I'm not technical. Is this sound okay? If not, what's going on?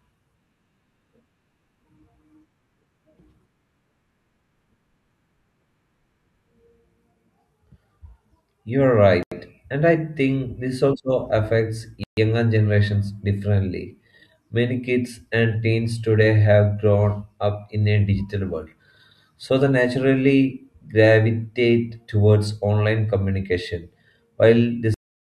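No. The speech drops out twice: about 86 ms of silence at 9.23 to 9.32 seconds, and about 137 ms at 12.04 to 12.17 seconds, then it carries on. This is likely a Bluetooth stall, where radio interference delays the wireless audio and the headphones briefly run out of sound to play.

The recording also has a cut-off end at 24.94 seconds. The speech stops mid-sound and falls straight to dead silence with no natural fade, because the last stretch of audio was never written out or played.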